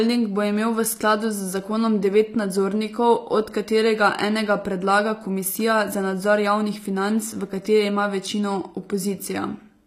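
Throughout the speech the top end sounds bright but synthetic: s sounds come out gritty and lispy, and nothing survives above about 15.5 kHz. The likely cause is HE-AAC compression at a low rate, around 24 kbps, where the treble is rebuilt from copied lower bands whose harmonics don't align.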